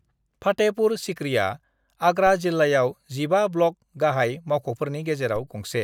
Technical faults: DC step

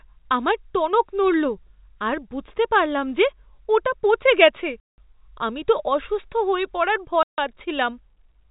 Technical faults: packet loss filled with silence

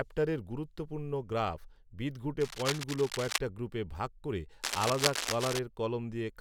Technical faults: cable scratch noise

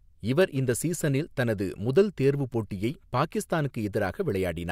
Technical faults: word clock ticks

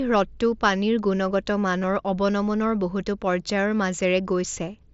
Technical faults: concealed Bluetooth headset packet loss

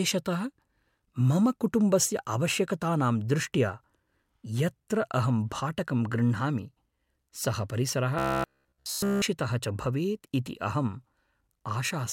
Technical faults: robotic sound from repeated short buffers

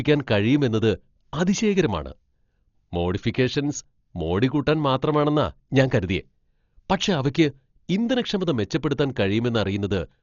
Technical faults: Dolby Digital compression

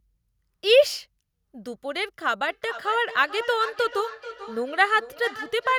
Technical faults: feedback echo between two devices

